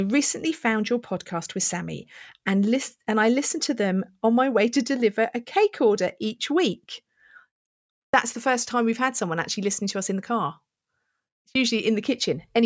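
No dropouts, glitches or level problems turn up anywhere in the speech.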